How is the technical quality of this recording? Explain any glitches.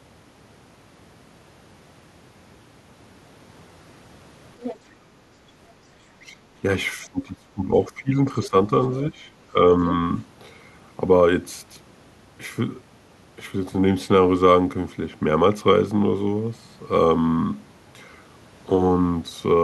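The speech has several short echo-control glitches between about 4.6 and 10 s.

Other side's voice leaking through, at 4.62–4.77, 8.37–8.49 and 9.85–9.94 s: a faint second voice, roughly 10 to 20 dB under the talker, likely from loudspeaker echo the canceller missed. It adds a voice rather than removing one.

Speech suppressed in double talk, at 6.21–6.32, 7.05–8.14, 8.46–8.55, 9.11–9.15 and 9.52–9.62 s: the talker's own voice dips, by roughly 10 dB and nearer 20 dB across the one-second stretch, likely from the canceller ducking both sides during overlap. This is a loss, not an extra voice.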